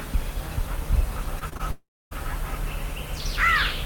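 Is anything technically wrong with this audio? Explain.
Yes. There are two faults, both network related.

From 1.39 to 1.61 s there is repeated packet loss with a robotic sound. Four short gaps, the longest 24 ms, are patched by repeating sound. About a third of the stretch sounds choppy.

From 1.71 to 2.13 s there is a long network dropout, likely from audio that never arrived. The last sound stretches into a fading buzz or hiss, then about 0.27 s of silence. The audio resumes with that stretch gone.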